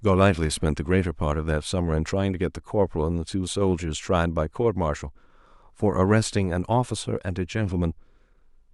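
No technical faults are audible.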